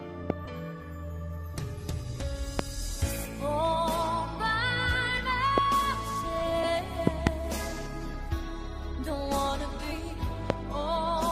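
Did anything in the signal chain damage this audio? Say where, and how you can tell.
Yes, two separate problems.

Loud pops come from the analogue side, most likely a connector, switch or static discharge putting a voltage spike into the line ahead of the converter. Single pops land at 0.30–0.32 s, 2.59–2.62 s, 5.58–5.60 s and 10.50–10.52 s, with a double pop between 7.07 and 7.29 s. Each sits about 20 to 25 dB above the programme as a sharp thump, and the audio continues straight through underneath.

The compressed frames skipped are a decoding or storage fault: blocks of the compressed stream never reached the output, so playback leaps forward. The jumps fall at 0.45, 3.25–3.28, 5.17, 6.63, 8.13 and 9.92 s. The first drops roughly 400 ms of material, the middle ones around 150 to 200 ms, and the last about 100 ms. The skips come in whole-block steps, which fits a 20 ms frame.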